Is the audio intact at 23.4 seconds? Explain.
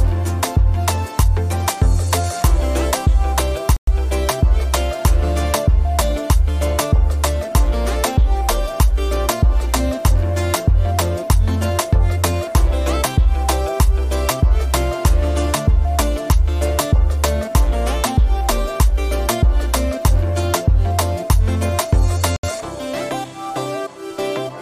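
Yes, at 23.4 seconds the audio runs intact, with no dropout, click, distortion or other fault at that moment.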